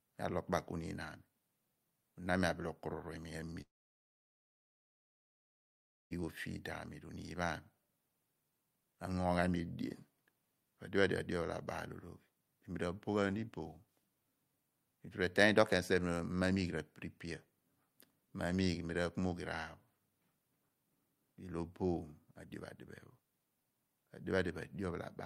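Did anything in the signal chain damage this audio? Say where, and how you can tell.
Yes, there's a long network dropout in this speech at 3.61 s. The last sound gets smeared into a fading buzz for a fraction of a second, then it's dead quiet for roughly 2.4 s until the audio returns at 6.13 s on "o feed". About 2.5 s of material is gone. The stage is the network: likely a run of packets never arrived, and the receiver's concealment only bridged the first moment before giving up.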